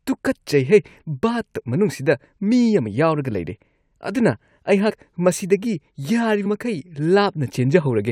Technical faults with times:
4.89 compressed frames skipped
6.45 compressed frames skipped

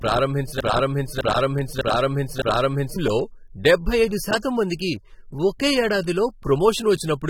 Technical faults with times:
0.00-7.30 AAC compression
0.60-2.96 broken-record loop

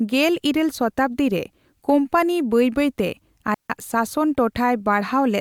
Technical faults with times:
3.54-3.70 digital wireless dropout

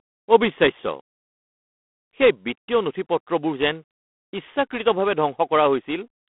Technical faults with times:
0.00-6.32 G.726 ADPCM

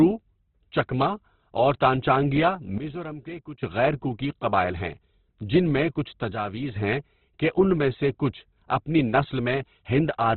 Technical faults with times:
0.00-10.37 Opus compression
2.78-3.63 sudden gain jump
6.33-6.76 sudden gain jump

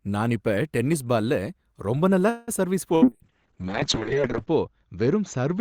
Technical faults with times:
2.29-2.51 call audio freeze
2.96-3.05 burst of packet loss
3.02-5.61 call bitrate drop

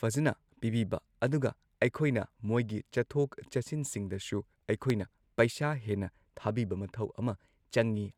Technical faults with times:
4.90-4.92 loud pop

